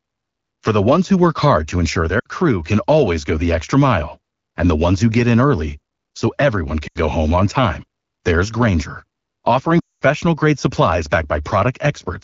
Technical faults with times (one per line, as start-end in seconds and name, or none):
2.20-2.27 lost AMR speech frames
6.87-6.98 lost AMR speech frames
9.80-10.03 lost AMR speech frames